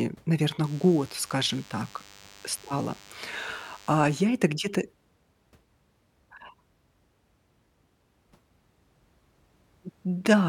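A nearby DECT cordless phone or its base station is pulsing radio bursts every 10 ms, and the audio circuitry rectifies them into the signal. From 0.64 to 4.21 s this DECT cordless phone buzz sits well below the speech as a thin, steady 100 Hz buzz rich in harmonics.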